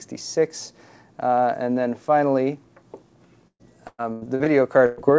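From 3.48 to 4.48 s the sound turns choppy as pieces drop out and are papered over. This is repeated packet loss (robotic sound): five separate gaps hit within that second, the longest about 114 ms. Each time, the receiver kept extending the last bit of audio to cover the hole, so roughly 38 percent of the stretch, around 0.4 s, is filler rather than real signal.

A second, single dropout follows at 4.86 to 4.99 s. The sound there stalls into a held, fading continuation and then jumps ahead, with about 120 ms simply gone. That is a burst of packet loss: a short run of packets never arrived in time, so the decoder stretched the last audio across the gap while turning it down, with no true silence inserted. Throughout, the audio has the dull top end of a G.722 call path, with nothing above 8 kHz.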